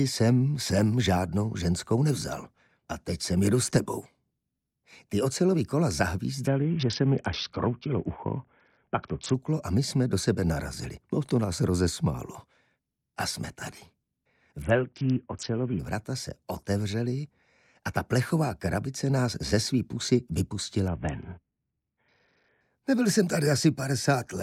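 A congested Bluetooth link forced the SBC encoder to cut its bit pool three times, from 6.47 to 9.34 s, 14.62 to 15.79 s and 20.88 to 22.61 s. Each is a Bluetooth SBC bit pool drop. The top sub-bands are starved of bits and the rest are coarsely quantised, so the treble goes dull and a gritty noise rises. The degradation fits a fall from a bit pool near 31 to about 6, roughly 55 kbps.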